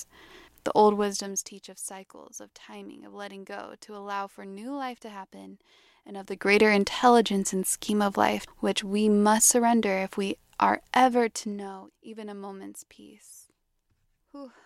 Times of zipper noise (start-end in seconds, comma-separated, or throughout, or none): 0.92-1.64, 10.92-11.92